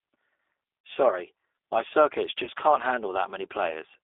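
G.729 coding runs through the whole speech clip, and its damage is plainly audible. The encoder keeps only a vocal tract filter, a pitch predictor and a few pulses per 10 ms frame, which fits the 8 kbit/s G.729A variant. The result is a rough, faintly synthetic texture. The band is confined to roughly 300 Hz to 3.6 kHz, so the sound is thin, with no low body and no air above.

VoIP packet loss concealed by the speech codec occurs at 0.86 s. About 30 ms of audio went missing, which points to a single lost packet. The decoder filled the gap by extending its last pitch and filter settings while lowering the gain. This turns the sound at that point into a brief stretched sound that fades. Because each frame builds on the previous one, the speech stays weak or distorted for tens of milliseconds after the gap.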